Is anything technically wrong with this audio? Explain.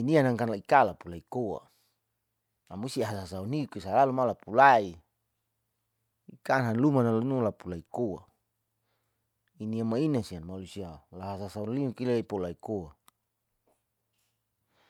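No, nothing technically wrong can be heard in this speech recording. There are no faults to point to or explain.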